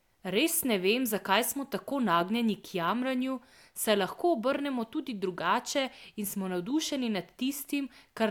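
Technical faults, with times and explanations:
No technical faults can be heard anywhere in this speech recording. There is nothing to time or explain.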